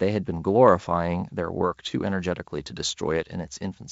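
No technical faults are audible in this speech.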